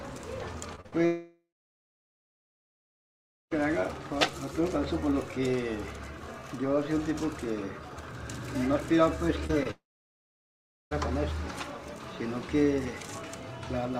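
Short concealed packet loss at 0.75 to 0.79 s and again at 0.81 to 0.86 s opens a cluster of trouble. About 20 ms and then 40 ms of audio failed to reach the decoder in time, and the receiver filled each hole by extending the preceding sound before blending back into the real signal. Each is heard as a brief smear or wobble rather than a clean gap.

A burst of packet loss follows immediately, from 0.86 to 0.94 s. Roughly 60 ms went missing in one run, longer than a single packet. The receiver kept the last sound going and faded it, so the stretch becomes a short held buzz or dying hiss, and the audio then picks up further along with that portion gone.

A long network dropout runs from 1.06 to 3.53 s. Nearly two and a half seconds never arrived. The concealment carries the last sound only briefly before it decays, leaving about 2.1 s of silence until the audio returns, with the intervening material missing. 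A sustained outage on the network path is the likely cause.

Two more short concealed packet losses come at 9.47 to 9.51 s and 9.63 to 9.67 s, each about 20 ms filled by continuation, giving quick smudges. They lead straight into a second long network dropout from 9.71 to 10.93 s. About 1.2 s is lost, a fading tail gives way to roughly 1.1 s of silence, and the sound resumes later in the stream.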